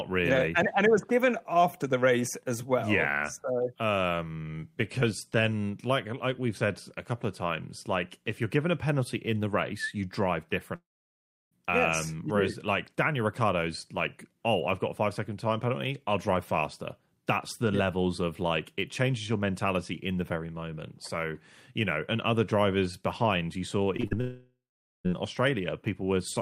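At 10.75 s the speech cuts out until 11.53 s, a gap of nearly 0.8 s, most likely a long network dropout. The receiver briefly carries the last sound on as a fading buzz, and most of the gap is plain silence. The speech picks up again afterwards, but whatever was said in that stretch is gone for good.

Right after "drivers behind you saw" comes a quick cluster of short concealed packet loss at 23.97 s, 24.00 s and 24.07 s. The gaps are about 30, 45 and 60 ms. Each time the decoder patches the hole by stretching the preceding sound and blending back in, so you hear a little smeared wobble. A short consonant can easily get swallowed in there.

The trouble doesn't stop there. At 24.21 s the audio cuts out again until 25.06 s, again likely a long network dropout, this one about 0.85 s. A fading tail of the last sound gives way to roughly 0.45 s of silence, and then the audio resumes with that chunk missing.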